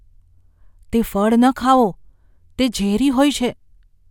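Listening through the speech, nothing stood out as a technical problem at any point.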